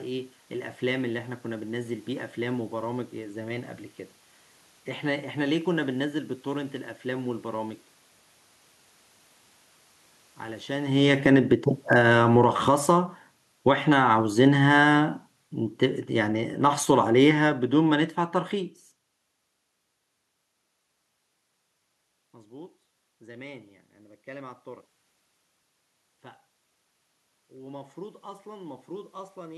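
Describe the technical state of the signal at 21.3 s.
At 21.3 s the signal is intact, with no technical fault; the room noise under the speech is part of the recording.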